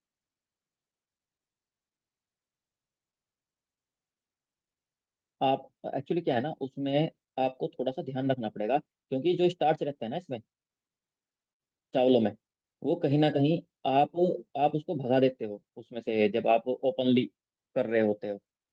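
Nothing here needs flagging, since the speech runs its course without a single technical fault turning up along the way.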